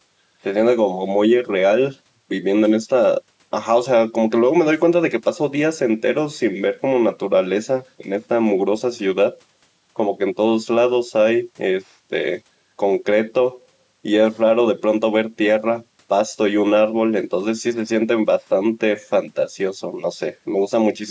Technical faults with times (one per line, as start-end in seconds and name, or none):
none